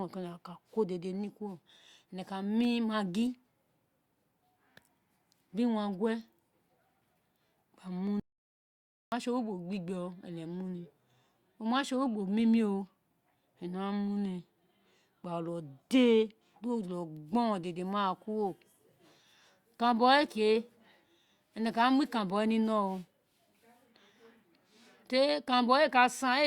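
At 8.20 s the speech cuts out mid-flow and the track falls to dead silence until 9.12 s. That's an audio dropout to silence, about 0.92 s long, with no room tone or noise floor underneath. Whatever was said in that stretch is simply gone. The likely cause is the input being lost for a moment, say a loose connection or a brief mute, while the recorder kept writing.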